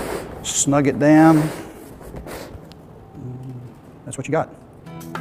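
At 1.70 s the pace jumps abruptly and stays fast to the end, with the sound running about 1.64 times quicker while its pitch holds. This time-stretched section sounds rushed, most likely from software compressing the audio by dropping short pieces.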